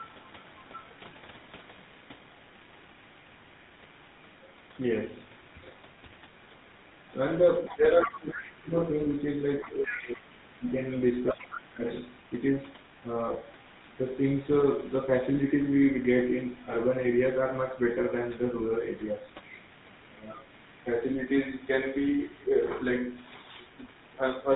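Throughout the clip the speech carries the sound of the GSM full-rate codec, and the damage is plainly audible. The codec models the vocal tract as a filter and excites it with a regular pulse train that keeps only one sample in three, so the speech takes on a buzzy, gravelly texture. Nothing passes above 4 kHz. The dulled top end and the rough excitation fit a 13 kbps full-rate stream.

From 14.12 to 14.15 s there are lost GSM frames. The decoder had no valid data for that stretch, so it reused the parameters of the last good frame. This is heard as a brief rough, metallic ring in place of the speech. The gap is short, which points to a single 20 ms frame being lost. Because the loss ends quickly, the sound never fades to silence before normal decoding returns.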